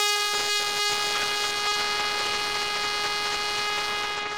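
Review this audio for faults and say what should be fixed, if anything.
Throughout the clip the music sounds hoarse, rough and grainy, with tones smeared into a noisy texture. The high end still reaches about 20.2 kHz, so the damage isn't a loss of bandwidth. This is likely Opus compression at a starved rate. The hoarse quality points to the hybrid mode built around speech coding, forced onto music at a bitrate that fits roughly 16 kbps. That leaves too few bits to code the bands faithfully, so it fills them with noise. To prevent it, encode music with Opus at 64 kbps or higher, or force its music mode.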